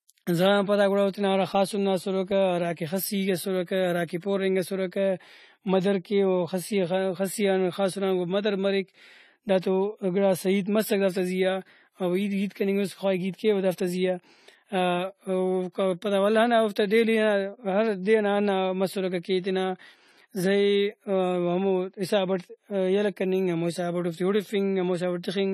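Throughout the speech there is plainly audible AAC compression damage, most likely from AAC-LC at a low bitrate, with the texture pointing to around 32 kbps. Nothing reaches above 13.5 kHz, so the highest frequencies are missing and the sound is dull. With too few bits to cover the spectrum, detail is dropped or roughly approximated, and sibilants and sustained sounds take on a smeared, warbling, fizzy quality.

Pre-echo appears just before "پورنگ اسرکہ", first at 4.07 s, spreading about 13 ms, then again from 4.20 to 4.22 s, spreading about 23 ms. In each case a sharp onset lands late within a coding block. The quantisation noise, sized for the loud attack, is spread across the whole block, including the quiet stretch ahead of it. A brief hiss leads into each onset, and the attacks sound softened and smeared.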